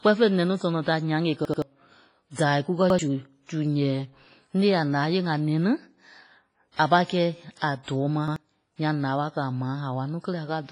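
WMA compression runs through the whole speech clip: the sound is washy and ringing, with a hiss that swells and falls with the voice and nothing above 10.5 kHz. This is likely a Windows Media Audio encode at a low bitrate, around 24 kbps. Its long transform blocks spread quantisation noise over tens of milliseconds and zero out weaker spectral detail, which leaves the top end dull and the texture smeared.

A repeated buffer comes first at 1.45 to 1.62 s, just after "tɔnɔ da nyaŋ e". One stretch of about 85 ms plays three times with a hard join at each restart, heard as a quick mechanical stutter. The length fits a 4096-sample buffer that the playback device reused because fresh audio arrived late, and roughly 150 ms of the real signal is lost.

Pre-echo follows at 2.32 to 2.38 s. A hiss of about 59 ms leads into a sharp onset, and the attack sounds softened. The codec spread its noise evenly across a whole block, so noise sized for the loud attack also fills the quiet moment before it.

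Another repeated buffer at 2.90 to 2.99 s replays one 85 ms piece once, a short double-take stutter costing about 100 ms of audio.

Pre-echo returns at 7.83 to 7.88 s, just before "tɔɔ ma", as a smear of about 46 ms ahead of the attack.

A final repeated buffer at 8.28 to 8.36 s, right after "a tɔɔ ma", sounds one 85 ms piece twice with a hard seam, again losing about 100 ms.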